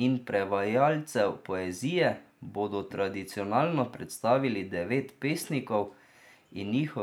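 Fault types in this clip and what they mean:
No technical faults can be heard anywhere in the speech signal.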